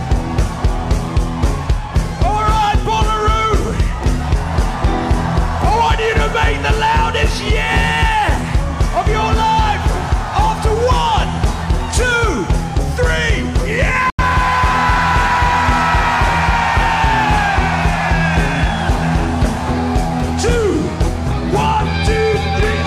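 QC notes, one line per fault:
14.10 to 14.23 s, digital broadcast dropout: the audio fades out within about 3 ms and goes silent as the receiver mutes on corrupted or missing frames. The roughly 85 ms of lost programme fits two dropped frames, and the sound returns further along.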